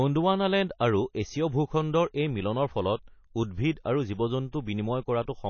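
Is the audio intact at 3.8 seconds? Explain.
No. At about 3.85 s there's pre-echo: a smear of hiss, roughly 11 ms long, arriving just ahead of a sharp onset, so the attack comes across soft rather than crisp. That happens because a transform codec spreads its quantisation noise across a whole block. When the onset lands late in one, noise sized for the loud part leaks into the quiet moment before it.

That moment also sits inside the MP3 compression that runs through the whole speech clip, which is plainly audible. Nothing survives above 6.6 kHz, so sibilants lose their top end, and the weaker frequency lines flicker on and off between frames, giving the sound a watery, swirly quality. The damage is heavy enough that it likely comes from a very low bitrate, on the order of 24 kbps, where the encoder has to cut the treble and drop detail to stay within budget.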